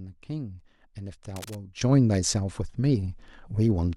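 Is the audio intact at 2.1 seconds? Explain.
No. From 1.81 s to the end of the clip the speech and its background noise jump up together by about 12 dB, an abrupt sudden gain jump. The likely cause is a digital gain change applied from one sample to the next with no ramp.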